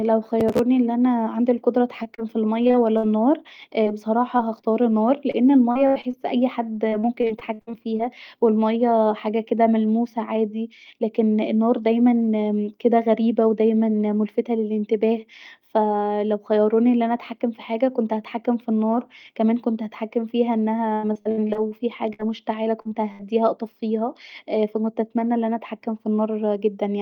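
From 0.40 to 0.59 s, just before "أن انا عندي القدره", processor overload crackle tears through the speech. Roughly fifteen buffer deadlines were missed, and each missed buffer was skipped outright, with buffers of about 3 ms. The result is gritty crackle. On a spectrogram it shows as a cluster of thin vertical broadband streaks, and the waveform has small hard-edged jumps.

Repeated packet loss (robotic sound) first appears from 2.03 to 3.05 s, with six gaps (longest 58 ms), and again from 5.31 to 6.15 s, with five gaps (longest 81 ms). Each hole is patched by extending the last sound, so the speech turns choppy. The patches show as smeared, flattened harmonic bands on the spectrogram and as copied, repeating cycles in the waveform.

Scattered short gaps follow from 3.83 to 4.65 s. About four brief losses, each up to about 20 ms, were concealed one by one. They are heard as ticks and hiccups in otherwise continuous sound. 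Each leaves a narrow smudge or seam in the spectrogram.

The same repeated packet loss returns from 6.89 to 8.03 s, between "أن اي حد" and "و المايه حاجه كدا". This stretch has twelve gaps, and about a quarter of the span is filled in. The longest run is from 20.93 to 23.23 s, after "كمان كنت هتحكم فيها" and before "واطفيها ف كنت اتمني". Here there are fourteen gaps, the longest 98 ms, giving sustained choppy sound with pieces missing.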